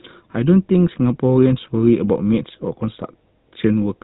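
From start to finish the speech has a buzzy, gravelly roughness, with a dull, boxed-in top end and nothing above 4 kHz. This is the GSM full-rate codec, and the damage is plainly audible. The codec rebuilds each stretch of speech from a simple vocal-tract model excited by evenly spaced pulses, keeping only a third of the excitation detail. The coarse excitation produces the grit, and the overall thinness fits a 13 kbps GSM full-rate stream.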